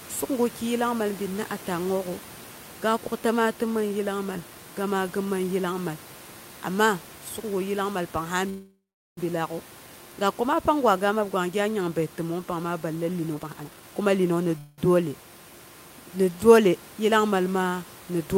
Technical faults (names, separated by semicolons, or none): call audio freeze; jitter buffer speed-up